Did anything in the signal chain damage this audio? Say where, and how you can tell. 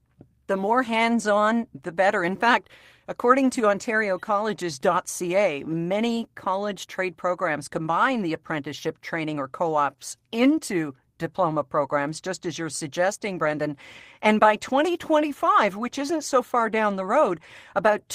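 Yes, at the network stage: one lost packet rebuilt from error correction at 13.45 s, after "just as you're suggesting". The 20 ms patch sounds rougher and noisier, decoded from the next packet's low-bitrate copy.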